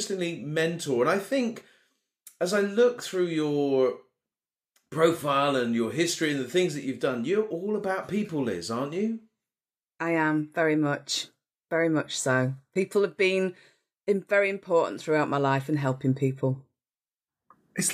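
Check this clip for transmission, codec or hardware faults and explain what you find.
No transmission, codec or hardware faults were found here.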